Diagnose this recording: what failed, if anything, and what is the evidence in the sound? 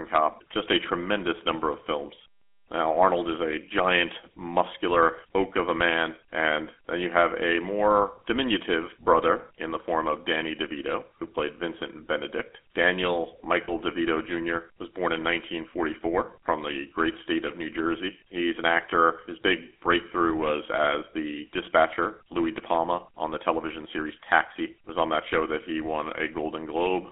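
GSM full-rate codec throughout, at the codec stage: speech sounds buzzy and gravelly within roughly 250 Hz to 3.5 kHz, consistent with 13 kbps pulse-excited vocal-tract coding.

Lost GSM frames at 13.64–13.71 s and 18.90–18.93 s, at the network stage: short metallic rings where the decoder repeats the last good frame.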